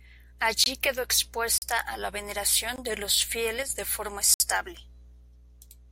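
Blocks of digital silence at 0.64–0.66 s, 1.58–1.62 s just before "a la", and 2.76–2.78 s just before "de los" are 20 to 40 ms holes, likely where the output buffer went unfilled. Each is a hard cut to silence, unlike a level dip. From 3.63 to 3.70 s, between "de los" and "de forma", the sound doesn't vanish but drops abruptly by about 6 dB, likely because one channel drops out. A final 60 ms silent block at 4.34–4.40 s is long enough to be heard as a short gap.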